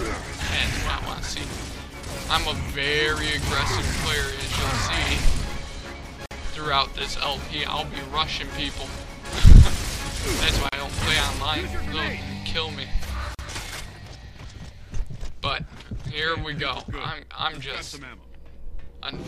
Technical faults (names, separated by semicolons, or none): gap at a join of encoded pieces